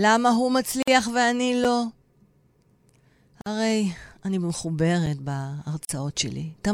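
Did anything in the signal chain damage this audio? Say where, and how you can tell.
Yes. Three short holes open in the speech, at 0.83 to 0.88 s (about 50 ms), 3.41 to 3.46 s (about 49 ms) and 5.85 to 5.89 s (about 42 ms), with softened edges before the sound resumes where it stopped. These are gaps at joins of encoded pieces, a codec-stage fault: separately encoded segments were spliced without trimming each run's start-up delay and final-frame padding.

Two brief dropouts, at 1.64 s and 5.06 s, are each a 5.8 ms block of digital silence with hard edges and no fade. That length fits a 256-sample buffer, which points to the driver or buffer stage: the program failed to fill an output block in time, so it went out as zeros.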